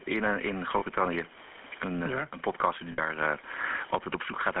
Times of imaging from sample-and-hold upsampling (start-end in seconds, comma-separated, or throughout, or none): none